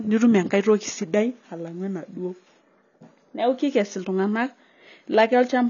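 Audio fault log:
throughout, AAC compression: the speech was likely squeezed through low-bitrate AAC-LC, consistent with about 24 kbps, so nothing survives above 6.9 kHz and coarse quantisation leaves spectral gaps, giving plainly audible dullness, smeared consonants and a warbling, fizzy texture on sibilants.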